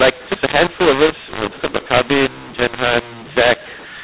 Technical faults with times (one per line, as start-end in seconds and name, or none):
0.00-4.04 mu-law and A-law mixed up